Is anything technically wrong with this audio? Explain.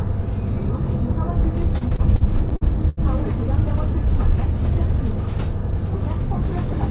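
Yes. Repeated stalls (stutter) run from 1.78 to 2.99 s. In that stretch the packets reached the receiver late or more slowly than they were being played, so its jitter buffer emptied eight times. Each time the receiver stretched the last bit of sound to cover the wait, up to 81 ms at the longest and about 251 ms in total. Nothing is lost, but roughly a fifth of that stretch is filler, so the sound drags and hiccups. Throughout, the band stops at 4 kHz, which fits the G.711 mu-law call codec at 64 kbps.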